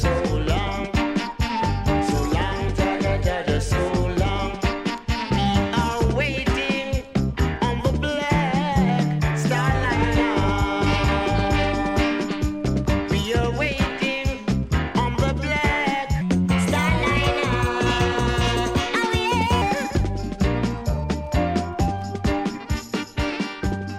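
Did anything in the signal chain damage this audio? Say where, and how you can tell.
Yes. From 16.21 to 19.62 s a section at the wrong speed plays 1.21 times fast, raising pitch about three semitones, likely a playback or editing stage using the wrong clock. On a spectrogram, harmonics jump upward and events compress, snapping back at 19.62 s.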